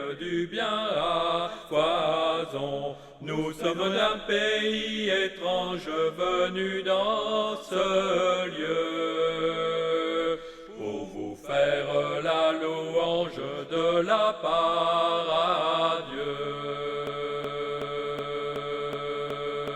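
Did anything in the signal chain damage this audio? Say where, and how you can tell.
Yes. From about 17.07 s right through to the end there's a broken-record loop: a 0.37 s fragment plays back to back, identical each time, seven repeats with no variation. That exactness is the giveaway. It's a stall rather than anything in the source, most likely in playback or streaming, where the buffer stopped refilling and the last chunk it held kept getting resent. Whatever sound belonged in those final seconds is simply gone.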